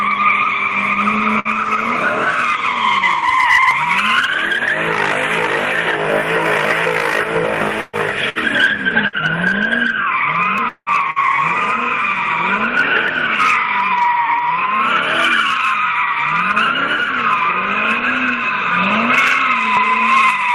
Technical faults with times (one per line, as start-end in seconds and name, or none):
1.39-1.48 burst of packet loss
3.71 dropped buffer (overrun)
7.81-7.96 burst of packet loss
8.29-8.38 burst of packet loss
9.07-9.16 burst of packet loss
10.58 dropped buffer (overrun)
10.69-10.89 long network dropout
11.10-11.19 burst of packet loss
13.08 dropped buffer (overrun)